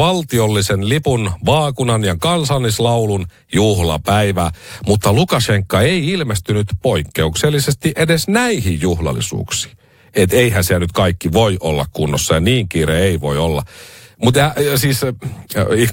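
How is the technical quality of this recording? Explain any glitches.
No audible glitches or faults.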